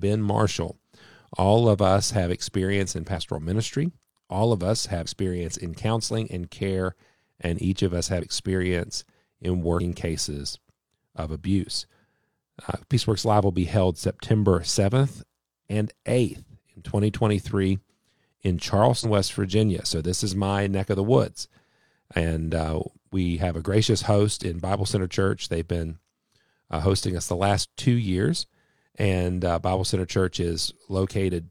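Compressed frames skipped: whole 46.4 ms frames are lost to the decoder, so the speech jumps ahead by roughly 50 or 100 ms at 3.12, 5.02, 8.18, 9.76, 19.0, 23.36 (after "uh we") and 27.59 s.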